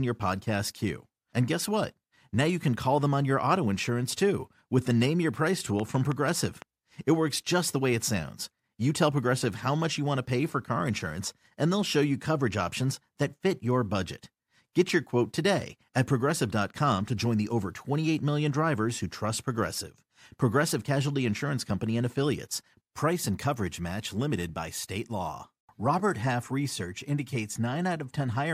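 From 5.80 to 6.63 s, a train of clicks ticks over the speech: about seven evenly spaced pops, six per second, around 10 dB above the signal. They appear as regular needle spikes in the waveform and thin full-height spectrogram lines, likely from electrical interference.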